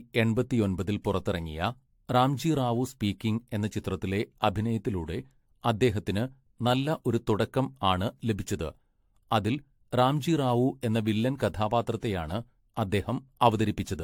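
Across the whole speech clip there is generation loss. The audio sounds swirly, hollow and smeared, with consonant attacks blurred and nothing above about 19.3 kHz. The likely cause is repeated lossy AAC encoding, about seven passes, each requantising on a shifted frame grid so the artefacts pile up. A single encode near 96 kbit/s would sound cleaner. The damage is out of proportion to that bitrate, which is what sets this apart from one low-rate encode.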